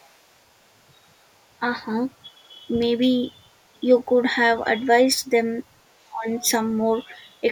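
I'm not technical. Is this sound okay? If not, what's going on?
No. Other side's voice leaking through happens from 0.0 to 0.42 s, 1.23 to 1.46 s, 2.11 to 2.17 s, 5.89 to 6.49 s and 7.09 to 7.19 s, as a faint second voice underneath, clearest around 6 s. Likely the talker's loudspeaker was picked up by their microphone, and the echo remover missed some of it.

Speech suppressed in double talk appears at 2.39 to 2.56 s as a brief dip, and from 6.06 to 6.26 s as a much deeper fade. Likely both sides spoke together, so the echo remover turned down the talker along with the echo.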